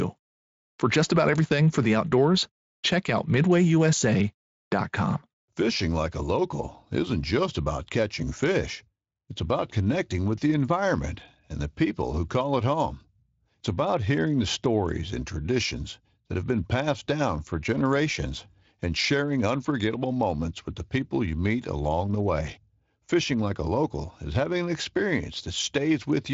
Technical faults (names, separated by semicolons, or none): none